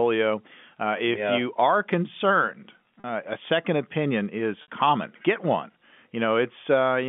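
A telephone-band speech recording with two brief glitches where the voice briefly locks into a held, slightly buzzy tone: at 3.0 s, right after "yeah you are concerned", and at 4.62 s, just after "a second opinion is". This is packet loss with pitch repetition: about 40 ms and then 60 ms of audio went missing, consistent with two and three 20 ms packets, and the receiver filled each gap by repeating the last pitch period under the G.711 line coding.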